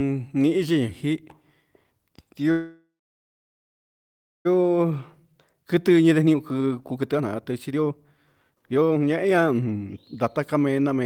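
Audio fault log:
2.51–4.47 s, call audio freeze: the speech stops and the last sound is drawn out into a brief buzzy tail that fades to silence for about 1.57 s of the 1.94 s pause. It then resumes exactly where it left off. Nothing is lost, but everything after it is about 1.94 s late, which likely points to delayed packets draining the jitter buffer. A true dropout would instead skip speech and show no added delay.
4.62–8.05 s and 8.50–11.04 s, jitter buffer speed-up: the speech runs hurried, at 128% and then 132% of normal speed, while the pitch stays the same. The receiver is cutting many short pitch-period slices to shed the backlog from the freeze, roughly a second in the first stretch and about 0.7 s in the second. A simple playback-rate error would raise the pitch along with the speed.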